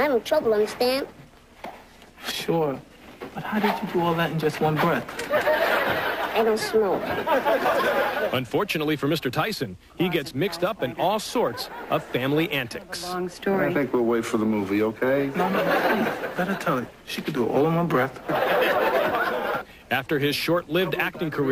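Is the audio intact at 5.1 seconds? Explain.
Yes, at 5.1 seconds the audio is intact, with no dropout, click, distortion or other fault at that moment.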